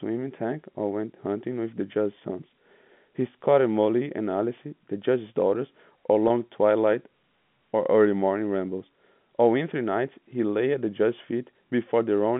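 At 6.28 to 6.30 s the speech hits a packet loss with pitch repetition. About 20 ms of audio goes missing, which fits a single lost packet. The receiver fills the gap by repeating the last pitch period. The gap is short, so the sound does not fade to silence. It comes across as a brief, slightly held buzz. The speech then resumes. The line's G.711 telephone coding stays narrowband around it, roughly 150 Hz to 3.5 kHz.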